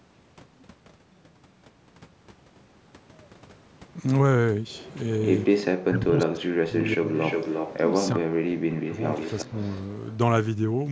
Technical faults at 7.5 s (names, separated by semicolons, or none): echo leak